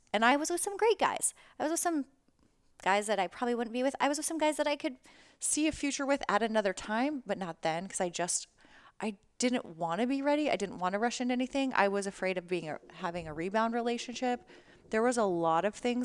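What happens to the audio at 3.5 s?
At 3.5 s the speech is inside a wrong sample rate stretch running from 0.32 to 5.13 s, just before "see a future with". Playback runs 1.09 times fast, which fits 22 kHz audio played at 24 kHz, so pitch also rises about 1.5 semitones. Unlike a pitch shift or time-stretch, speed and pitch change together.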